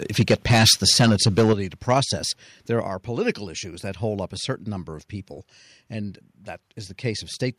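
It's a speech clip, and the trouble starts right away. From 0.19 to 1.53 s there's clear microphone overload: the peaks run about 9 dB past the converter's ceiling and something like a tenth of the waveform gets its tops sheared flat, so the loudest syllables come out harsh and crackly. A shorter, milder patch at 1.9 to 2.0 s goes about 2 dB over with only a small share of samples clipped. The likely cause is the mic input simply being set too hot. You can also hear microphone volume stepped down three times, each a sudden drop in the voice and the room noise together: about 3 dB at 0.22 s, a bigger one of about 8 dB at 1.53 s just as the first distorted stretch ends, and about 5 dB at 2.88 s, right before "political issues that hold". That pattern of sharp drops landing on or just after clipped peaks points to the call software's automatic gain control, which likely reacted to the overload by pulling the device's input level down in single steps rather than easing it.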